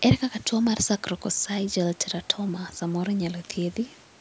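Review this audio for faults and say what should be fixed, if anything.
Nothing needs fixing: the speech comes through the call's microphone processing as expected, with the lowest bass trimmed by its high-pass filter and no content above 8 kHz.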